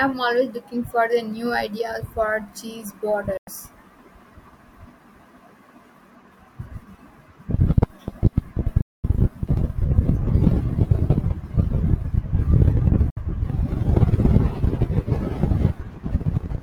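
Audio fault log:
3.37–3.48 s, 8.81–9.04 s, 13.10–13.17 s, digital broadcast dropout: the receiver lost good frames and muted, so speech snaps to silence in 3 ms for 96, 224 and 64 ms (the first right after "new ideas for cheese"), and that audio is gone.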